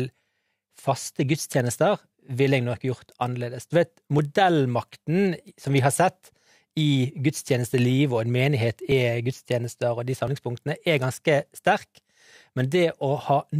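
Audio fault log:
4.19, 5.65, 7.73, 8.92 and 10.28 s: jumps where the sound skips ahead with no silence, losing roughly 5 to 20 ms, likely a dropped buffer (overrun).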